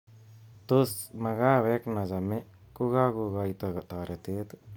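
No technical faults are audible anywhere in the speech.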